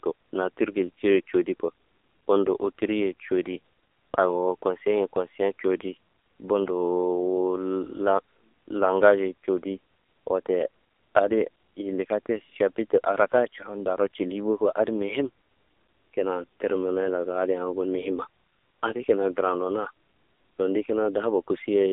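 Throughout, AMR narrowband mobile codec damage: nothing above 3.7 kHz, a thin 300 Hz to 3.6 kHz line band, and heavily buzzy, synthetic speech that fits a low bitrate around 6.7 kbps.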